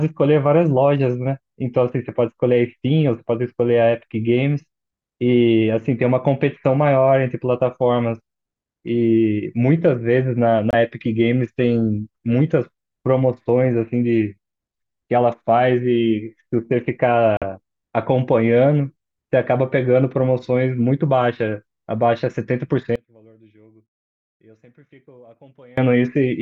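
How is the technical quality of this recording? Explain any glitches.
The recording has two brief gaps and one stretch where the speech nearly disappears.

Two short silences, at 10.71 s (about 23 ms) and 17.37 s (about 46 ms), are likely Bluetooth dropouts. Late packets were discarded, which fits one and two lost frames. Unlike a pause or an edit, the speech resumes further along, as if it had kept playing through the hole.

From 22.96 s to 25.77 s the speech falls by about 30 dB. This is likely one channel inverted, so the centred voice cancels when the two channels are summed to mono. Unlike a dropout, sound is still present, leaving only the faint difference between the channels.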